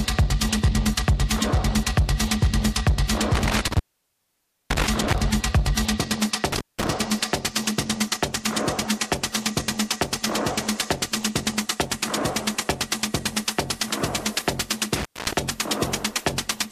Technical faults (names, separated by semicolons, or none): intermittent contact